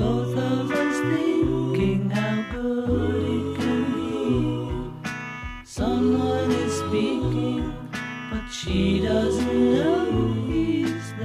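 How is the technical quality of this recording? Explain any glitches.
No glitches or technical faults can be heard here.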